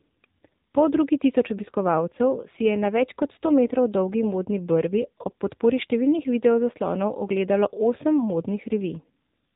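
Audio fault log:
throughout, AMR narrowband mobile codec: the speech sounds boxed-in and telephone-like, with a buzzy, synthetic edge that is plainly audible. Everything above 4 kHz is missing, because the audio has been carried at an 8 kHz sampling rate. Each 20 ms frame is rebuilt from a vocal-tract model excited by only a handful of pulses, and the coarse texture points to one of the lower AMR-NB modes, around 7.4 kbps.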